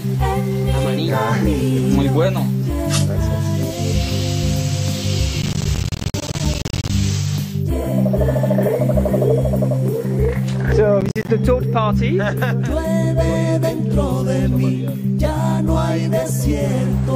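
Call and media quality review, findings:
Processor overload crackle, 5.42–6.90 s and again briefly 11.01–11.29 s. Gritty tearing from a run of tiny dropouts: the audio thread misses buffer deadlines, each miss leaving a short hard-edged silent gap, around 10 ms each, pointing to a small buffer. Stops once the load clears.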